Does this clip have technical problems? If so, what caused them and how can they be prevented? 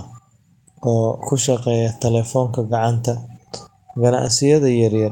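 Yes. At 2.23–2.25 s and 4.25–4.27 s, a lost packet was rebuilt from error correction. A coarse copy filled each 20 ms gap, so the speech briefly roughens. Reducing network packet loss prevents this.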